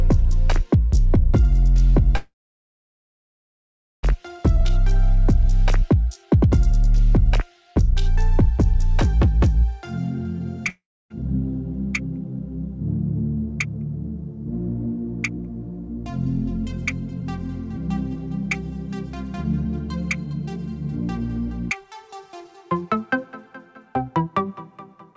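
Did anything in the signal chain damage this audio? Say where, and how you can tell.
Yes. From 2.16 to 4.05 s the sound stops, trails off as a fading buzz or hiss, then sits silent for about 1.7 s before resuming exactly where it left off. This is a call audio freeze, likely caused by packets stalling on the network so the jitter buffer ran dry and inserted roughly 1.9 s of delay.

Between 10.69 and 11.12 s there is a short fading fill and about 0.29 s of silence, and when sound returns about 0.76 s of material is simply gone. That jump points to a long network dropout, likely from packets that never arrived, with the receiver skipping ahead.

From 14.86 to 18.17 s the timing runs about 1% fast, removing about 50 ms. From 19.44 to 20.57 s it runs 9% fast, removing about 100 ms. From 25.11 s to the end it more than doubles in speed. Pitch stays constant throughout, which marks a jitter buffer speed-up: the call processing trimmed whole pitch periods to shed excess buffered delay.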